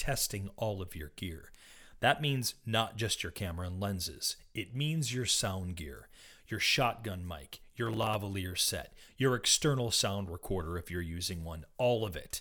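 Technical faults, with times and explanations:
7.86–8.15 s, processor overload crackle: after "your shotgun mic your", about ten buffers of roughly 5 ms missed their deadlines and replayed old audio. The hard-edged repeats fuse into gritty tearing, a dense cluster rather than one isolated dropout, ending before "set your external sound".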